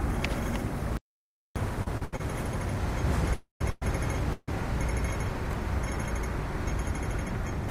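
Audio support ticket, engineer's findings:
Audio dropout to silence, 0.97 to 1.56 s. Sound cuts out abruptly, about 590 ms lost, no room tone in the gap. Waveform: dead flat line. Spectrogram: fully black column with hard vertical edges. Likely input loss (device disconnect, link failure or mute) while the recorder kept writing silence. Content in that window is unrecoverable.

Repeated stalls (stutter), 1.83 to 2.21 s. Four short holds, 171 ms filled in total, longest 72 ms, nearly half the span concealed. Nothing dropped, but the sound drags and judders. Jitter buffer repeatedly ran dry on late packets; receiver extended the last sound each time. Spectrogram: short horizontal smears, frozen spectral slices. Waveform: repeated copies of the preceding cycle.

Call audio freeze at 3.34 to 3.61 s (265 ms held, last 120 ms silent), 3.70 to 3.83 s (112 ms) and 4.33 to 4.49 s (150 ms, 20 ms silent tail). 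Each is a held, fading continuation of the last sound, then playback resumes where it stopped, adding delay without losing content. Likely packet delay in transit emptying the jitter buffer. Spectrogram: stretched static bands decaying, to black where silent.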